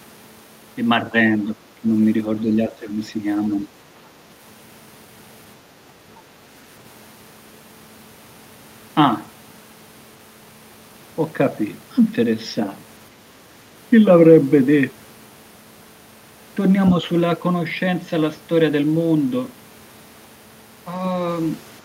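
A speech clip in which the talker's level drops twice, from 1.45 to 1.86 s by roughly 15 dB and from 2.42 to 3.19 s by around 10 dB, with parts of each stretch sounding thinned or chopped. This is likely speech suppressed in double talk: an echo canceller, unable to separate the near talker from loudspeaker echo, turned both down. On a waveform the envelope visibly shrinks in those windows. A spectrogram shows the upper harmonics fading and patchy gaps.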